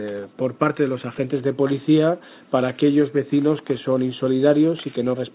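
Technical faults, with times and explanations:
No technical faults heard.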